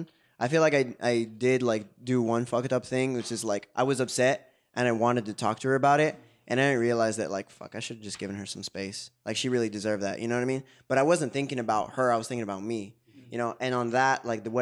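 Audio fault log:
No faults are heard anywhere in this speech clip.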